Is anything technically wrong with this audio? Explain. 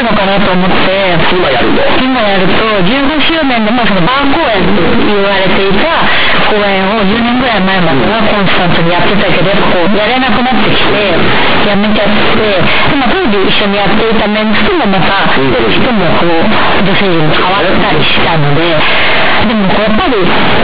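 Yes. Throughout the speech, the audio suffers from companded audio read as linear. The mu-law bytes of the telephone coding were treated as plain linear 8-bit samples and never expanded. Each sign change throws the waveform across about half its range, so quiet passages come out as large as loud ones. It sounds like harsh, very loud, buzzy distortion, with heavy noise filling the pauses. The waveform looks like a dense, squared-off block with no visible gaps. On a spectrogram, broadband noise smears across everything below the 4 kHz ceiling.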